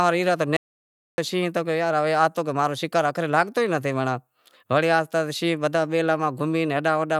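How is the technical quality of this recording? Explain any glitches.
The recording has one clear glitch, an audio dropout to silence. From 0.57 s to 1.18 s, just after "ای رہیا", the input feeding the recorder was likely interrupted, by a lost connection, a failed link or a brief mute, while the recording carried on writing silence. The speech stops abruptly in mid-flow and resumes just as suddenly, and the 0.61 s gap in between is dead silence with no room tone at all. Whatever was spoken during that stretch is lost.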